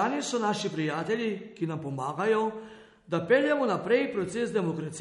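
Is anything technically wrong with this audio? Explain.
Yes. Throughout the speech the treble stops dead at about 11.1 kHz, and what remains has a watery, swirling quality with smeared attacks, most likely MP3 compression at a low bitrate, something like 48 kbps. Short of bits, the encoder cuts everything above a fixed frequency and zeroes weaker frequency lines that then flicker on and off between frames. That flickering is what separates it from a simple low-pass filter, which would dull the sound without any swirl.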